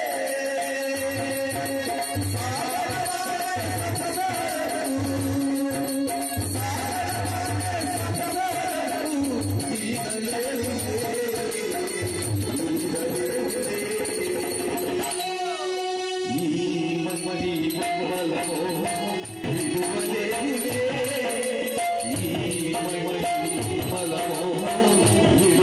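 Sudden gain jumps occur at 19.2 s and again at 24.8 s. At 19.2 s the sound and its background noise drop together by about 9 dB in a single step, recovering at 19.44 s. At 24.8 s both rise abruptly by about 10 dB and stay raised to the end. The likely cause is a digital gain change applied between adjacent samples with no ramp, such as an abrupt setting change or bit shift.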